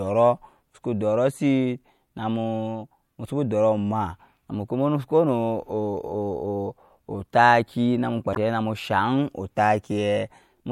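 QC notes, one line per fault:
8.32–8.37 s, damaged data in a compressed stream: a brief glitch in the speech, as the decoder misreads corrupted frames, loses sync and resumes at the next valid frame header.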